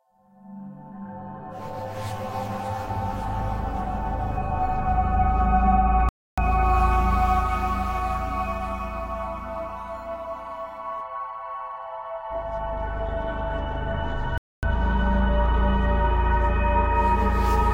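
It's a clip of sounds, and it drops out twice: the audio cuts off mid-flow at 6.09 s and stays silent for about 290 ms, then does it again at 14.38 s for about 250 ms before carrying on. That's a playback stall, most likely the player running short of data or its thread getting blocked, so nothing reached the output until it caught up and resumed.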